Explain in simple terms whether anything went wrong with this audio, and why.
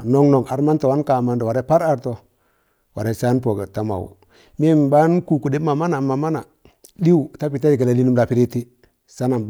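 Nothing went wrong with this speech recording that a listener can pick out. The sound stays steady throughout, with no moment that stands out as a problem.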